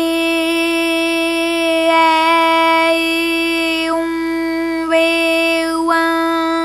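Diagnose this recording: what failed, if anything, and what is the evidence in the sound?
The failure is in the analogue wiring: there's mains buzz running under the whole clip, a steady, raspy drone sitting roughly 30 dB below the wanted sound. It's built on 50 Hz, and its harmonics climb well up into the kilohertz range, which is what makes it buzz rather than hum. That edge comes from sharp switching spikes, twice per mains cycle, from something like a dimmer, a rectifier or a gap in the shielding getting into the signal path.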